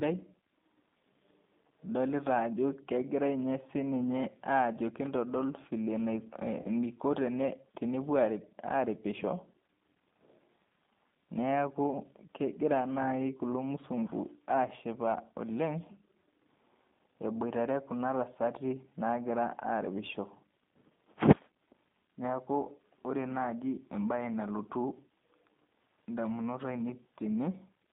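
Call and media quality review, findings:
G.729 codec throughout. Band-limited line, roughly 150 Hz to 3.7 kHz. Rough, synthetic speech texture from 8 kbit/s pulse-based modelling. Plainly audible.

Packet loss concealed by the speech codec, 6.62 to 6.67 s. About 30 ms missing, fitting one lost packet. Decoder stretches prior pitch, fading buzzy tone or coloured noise.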